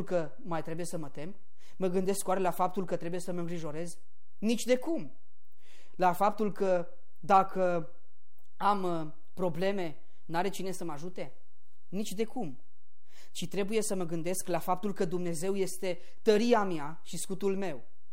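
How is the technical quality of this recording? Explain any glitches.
The recording carries one technical fault, a DC offset present for its entire length. Somewhere in the capture or conversion chain a constant voltage was added to the signal, so the whole speech waveform sits displaced from the zero line by a fixed amount, about -32 dBFS. Because it never changes, it cannot be heard as a tone or noise. It shows up instead as steady energy at 0 Hz and slightly reduces the headroom available before clipping.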